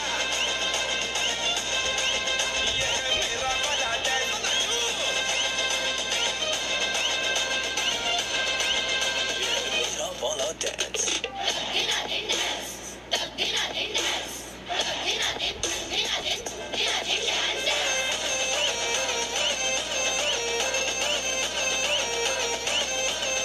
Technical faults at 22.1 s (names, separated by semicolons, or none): mains hum